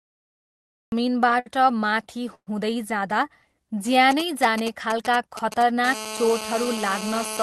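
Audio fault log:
0.00–0.92 s, cut-off start: The clip opens on digital silence and the speech comes in abruptly at 0.92 s, already mid-sound, with no attack or fade. The capture began late, after the talker had started. On a waveform this shows as a flat silent line that jumps straight into the speech. A spectrogram shows a blank region ending in a hard vertical edge.
1.39–1.48 s, short stall from a late packet: A sound is held about 65 ms too long, with a faint buzzy, slightly dipped quality, and the speech then carries on from the same point. A packet arrived late and the jitter buffer ran dry, so the receiver stretched the last audio until it caught up. Nothing is lost. The spectrogram shows briefly frozen, smeared harmonics, and the waveform shows a repetitive, slightly sagging stretch.
2.35–2.49 s, call audio freeze: The sound locks into a buzzy continuation that fades to silence for about 70 ms, then the speech resumes exactly where it stopped, making a 120 ms gap in total. 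The likely cause is held-up packets emptying the jitter buffer, with the receiver filling until they arrived. A spectrogram shows smeared, fading harmonics and then a blank column. The waveform decays to flat before the speech restarts.
4.11–5.86 s, GSM signalling bursts: A galloping dit-dit-dit pattern of short buzzes sits roughly 10 dB below the speech and has nothing to do with it. A nearby 2G phone is sending short groups of radio bursts, and the audio circuitry rectifies them. Each group pulses at about 217 Hz. The spectrogram shows intermittent clusters of evenly spaced harmonic lines stacked on 217 Hz. The waveform shows irregular packets of spiky pulses.
5.87–7.43 s, GSM phone buzz: The intermittent bursts change into a continuous hard, raspy buzz at about 217 Hz, around 10 dB below the speech. The nearby phone is now in a call and transmits 217 bursts a second, each one rectified into the audio. 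A spectrogram shows a steady comb of harmonic lines at multiples of 217 Hz. The waveform carries a regular pulse train under the speech.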